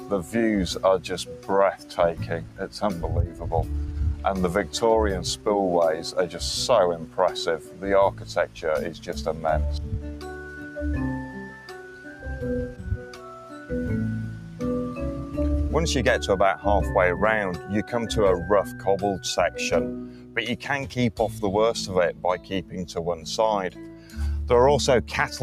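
A speech-tuned noise suppressor has been left running on this non-speech audio, treating sustained tones, ambience and decays as noise. Its gain swings by around 10 dB, so attacks pass while held material sinks, giving a pumping, thinned character throughout.

Sound is cut by the noise suppressor at 0.00–0.34 s, 1.02–2.76 s, 7.01–9.44 s, 10.13–13.50 s, 18.69–18.86 s, 20.04–20.36 s and 22.13–24.17 s. Level drops by about 5 to 9 dB, and sustains and tails audibly dip or are clipped short.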